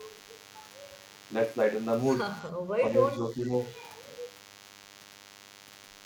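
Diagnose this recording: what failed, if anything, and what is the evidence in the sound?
A DECT cordless phone buzz runs through the whole speech clip. This is an analogue wiring fault. A thin, steady 100 Hz buzz with many harmonics sits about 25 dB below the speech. Radio bursts every 10 ms are being rectified in the audio circuit.

The speech dips briefly at 2.80 to 2.84 s and again from 3.16 to 3.53 s, dropping by roughly 5 dB. This points to call processing. The likely cause is speech suppressed in double talk. The echo canceller turned down the near talker while the far side spoke.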